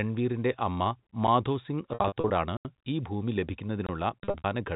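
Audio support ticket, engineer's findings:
Packet loss with pitch repetition, 1.94–2.30 s and 4.24–4.44 s. Dropped packets scattered across the spans: about 200 ms lost over 360 ms, then 140 ms over 200 ms. Pattern fits 20 ms packets. Receiver's concealment loops the last pitch period. Short holes sound held and buzzy. The longest runs, 60 ms, outlast the roughly 50 ms fade and dip toward silence before audio cross-fades back. Probable component: network path or jitter buffer.

Block of digital silence, 2.57–2.65 s (80 ms) and 3.87–3.89 s (about 24 ms). Output hard-cuts to zero and back with no fade. The first is heard as a short hole. Probable component: audio output path. Mechanism is likely a buffer underrun, where the playback buffer isn't filled in time and zeros are played. G.711 mu-law coding on the line, 64 kbps, band-limited to 4 kHz.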